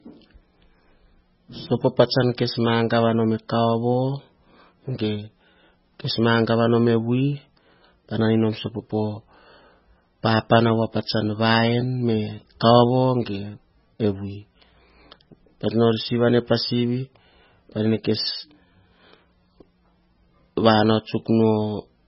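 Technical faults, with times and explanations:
Throughout, MP3 compression: the speech sounds heavily processed, watery and swirly, and there is nothing above 5.5 kHz. This is likely MP3 coding at a very low bitrate, which fits about 16 kbps. With so few bits, the encoder cuts all the treble at a fixed point. It also drops weaker frequency detail, which flickers on and off between frames. That causes the swirl, dulls s sounds and smears the onsets of sounds.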